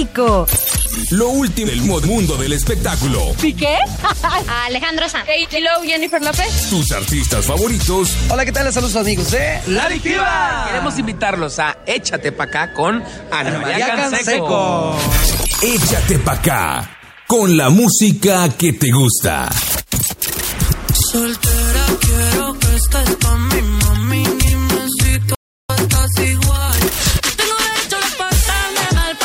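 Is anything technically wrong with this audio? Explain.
Yes, there are three kinds of fault.

Frames out of order occur at 1.66 to 2.06 s, 5.27 to 5.58 s and 24.41 to 24.54 s. In each, two neighbouring blocks of about 186 ms, 139 ms and 46 ms arrived swapped and were decoded that way, which fits runs of four, three and one frame. The stretch sounds like a garbled flutter. Unlike a dropout, nothing is missing and no time is lost; the material is only rearranged.

A playback stall runs from 25.35 to 25.70 s: the output goes silent for about 350 ms, most likely because the player ran short of data or its thread was blocked. What separates it from a dropout or a cut is that the sound halts mid-flow and then resumes exactly where it stopped, so nothing is skipped. The gap is pure delay rather than lost material.

Time-compressed catch-up follows directly, from 25.70 to 28.00 s, as the player works off the backlog left by the stall. 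It plays at 1.15 times normal speed by cutting out small pieces and cross-fading over them. The result sounds hurried, but the pitch stays unchanged. That distinguishes it from a simple speed-up or a sample-rate mismatch, both of which would raise the pitch along with the tempo.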